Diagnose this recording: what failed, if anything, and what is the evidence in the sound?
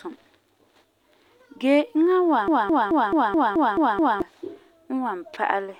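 From 2.48 to 4.22 s the speech sticks in a broken-record loop: a fragment of about 0.22 s plays eight times back to back, and whatever should have followed is simply gone. That's likely a stalled player or stream buffer re-sending its last chunk.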